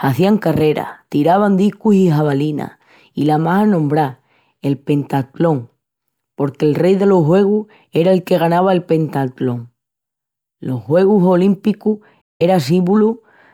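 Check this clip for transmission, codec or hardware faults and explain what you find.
One fault, a stream reconnect at 12.22–12.42 s: the connection drops, leaving about 185 ms of silence, then a fresh decoder resumes the speech roughly a tenth of a second further on.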